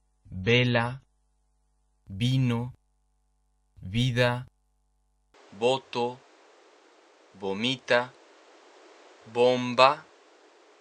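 The audio opens on an adaptive stream starting at a low bitrate. Until 2.0 s it lacks anything above 10.5 kHz and carries heavier codec artefacts, which fits roughly 32 kbit/s MP3, before stepping cleanly up to a rate near 128 kbit/s. From 5.34 s to the end, the band suddenly narrows to nothing above 9.1 kHz, a new noise floor appears about 30 dB down, and the level stays much the same with no gap, likely an input switched to a poorer device.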